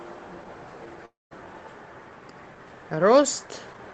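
Speech that breaks off at 1.05 s into a fading buzz, then silence until 1.33 s, with about 260 ms lost: likely a long network dropout.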